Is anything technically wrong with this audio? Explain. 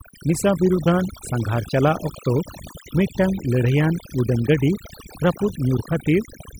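Yes. Throughout the speech, overdone noise removal strips frequency bands that sit near the estimated noise floor, taking quiet voice detail too. The background drops and breaks up into twinkling specks. A simple gate would instead cut everything at once.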